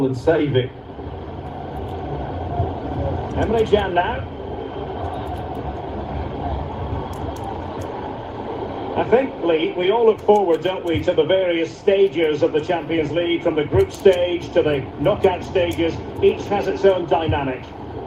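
From 9.13 to 10.21 s the sound briefly runs 3% fast while its pitch stays put. This is a jitter buffer speed-up. The receiver had built up excess delay and trimmed short pitch-period pieces in quick succession, removing about 40 ms in total.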